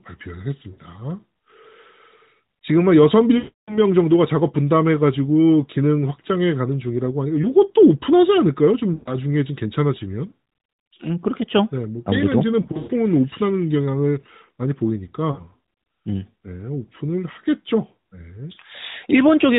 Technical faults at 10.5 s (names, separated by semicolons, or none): none